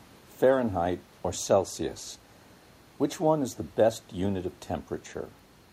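No system faults are audible in the speech, and the room noise sits about 33 dB below it as part of the recording itself.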